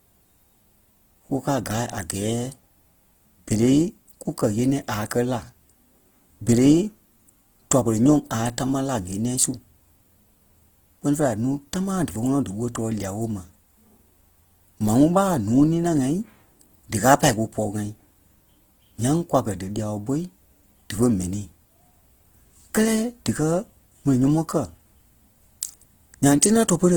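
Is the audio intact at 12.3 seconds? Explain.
No. At 12.3 seconds the speech sounds rough and grainy, with a noisy texture laid over it, and this runs through the whole clip. Opus compression is the likely cause. Starved bands are refilled with folded or noise content, which fits roughly 16 kbps, while the bandwidth reaches 20.2 kHz.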